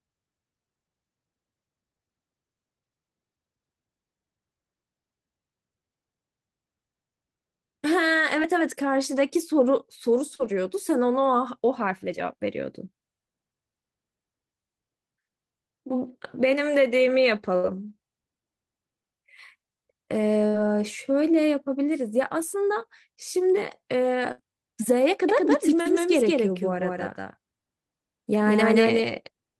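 Short concealed packet loss at 8.42 to 8.45 s and 10.35 to 10.41 s: about 20 ms and 40 ms of speech arrived too late, and the receiver bridged each hole by extending the preceding sound before blending back, leaving a brief smear or wobble.

A burst of packet loss hits at 17.56 to 17.65 s, 20.47 to 20.56 s and 24.32 to 24.40 s. Roughly 60 to 80 ms went missing each time. The decoder carried the last sound forward as a fading buzz or hiss, then jumped ahead with that stretch gone.

A doubled audio track begins abruptly at 25.29 s and runs to the end. A dry, full-band second copy at about the same loudness trails the original by around a fifth of a second, likely from the signal being picked up again through a slower path.

At 25.81 to 25.87 s, another short concealed packet loss of about 40 ms briefly smears the sound under that echo.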